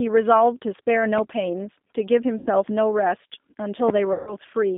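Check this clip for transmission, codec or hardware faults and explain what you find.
Three faults are present: the G.729 codec throughout, two packet-loss gaps concealed by that codec, and one loud pop.

The G.729 codec runs for the whole clip, coding speech at 8 kbit/s through a pitch and vocal-tract model. The line is limited to roughly 200 Hz to 3.6 kHz, and the voice sounds plainly rough and synthetic.

VoIP packet loss concealed by the speech codec occurs at 2.38 to 2.49 s, covering about 80 ms, and at 4.13 to 4.36 s, covering about 140 ms. The first gap fits four lost 20 ms packets. In each gap the decoder repeats its last pitch and filter at falling gain, so the speech smears into a fading buzz and stays weak afterwards.

A loud pop sits at 3.89 to 3.92 s, likely from a sudden voltage step such as a plug, switch or static discharge. It is heard as a single sharp crack about 20 dB above the speech.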